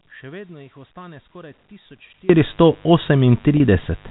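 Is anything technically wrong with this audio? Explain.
Yes, there are three faults in this telephone-band speech clip.

A mains buzz runs through the whole clip. Sharp switching spikes from a dimmer, rectifier or poorly shielded cable enter twice in every 50 Hz cycle and leave a raspy buzz roughly 30 dB below the speech. On a spectrogram it appears as evenly spaced horizontal lines at multiples of 50 Hz, stacked up to the 4 kHz ceiling of the G.711 telephone coding. The waveform shows small spikes repeating every 10 ms.

An audio dropout to a faint residue is already under way when the clip starts and lasts until 2.30 s. During that time only a faint trace of sound remains, about 25 dB below normal level. The wanted signal was likely lost while the path after the break stayed live, so the gap is not true silence. At 2.30 s the level jumps back abruptly. The waveform shows a thin, low band that suddenly widens to full level, and the spectrogram shows a dim region followed by a sharp vertical edge.

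Packet loss with pitch repetition occurs from 3.57 to 3.60 s. About 30 ms of audio was missing, which fits a single lost packet. The receiver filled the gap by repeating the last pitch period, so the sound briefly holds and turns buzzy for an instant. In the waveform, identical cycles repeat for that short stretch. On the spectrogram, the harmonics run flat and unchanging across the gap instead of following the natural movement of the speech.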